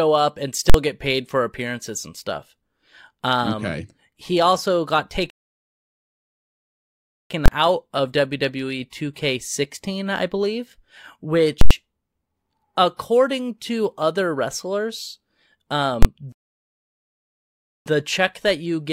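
A calculation produced invalid numbers that were pinned at full scale (invalid numbers at full scale), first from 0.70 to 0.74 s, a 46 ms block that fits 2048 samples, heard as a very loud pop.

The player then likely ran out of data, a playback stall, so the speech cuts to silence from 5.30 to 7.30 s, two seconds, before continuing.

Full-scale blocks return from 7.46 to 7.48 s (23 ms) as a single bang, from 11.61 to 11.71 s (93 ms) with a loud pop at each edge and silence between, and from 16.03 to 16.05 s (23 ms) as another bang.

A second stall silences the speech from 16.32 to 17.86 s, about 1.5 s.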